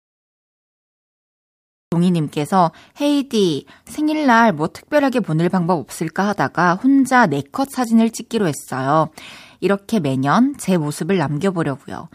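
From 0 to 1.92 s there is digital silence, then the speech bursts in already mid-sound: a cut-off start, where capture began late. Unlike a dropout, nothing precedes the gap, and unlike a fade-in, the level jumps straight to full with no onset.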